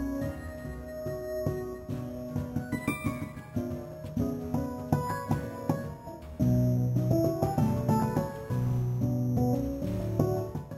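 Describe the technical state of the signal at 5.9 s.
At 5.9 s, as throughout the clip, there is imaging from sample-and-hold upsampling. The sound points to a rate raised from 12 kHz to 48 kHz by repeating samples with no smoothing filter, so mirrored copies of the 0 to 6 kHz content sit above 6 kHz. The first copy spans 6 to 12 kHz at about 26 dB below the signal, heard as a metallic fizz that rises and falls with the sound. Harmonic distortion would track pitch upward, but this image moves opposite to it.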